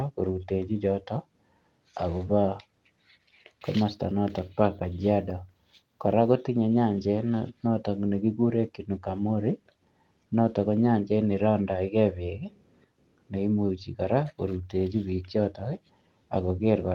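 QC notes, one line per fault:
No fault to note in this clip.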